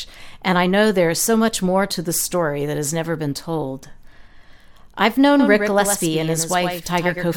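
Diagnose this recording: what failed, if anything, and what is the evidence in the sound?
From 5.40 s to the end, the speech gains a flat, slap-like echo trailing roughly a tenth of a second behind, about 5 dB quieter, with no decay or room colour: a doubled audio track, likely from a second, slower capture path being mixed in.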